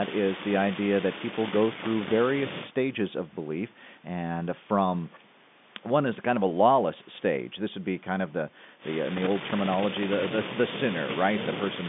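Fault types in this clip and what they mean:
No faults are present in this speech.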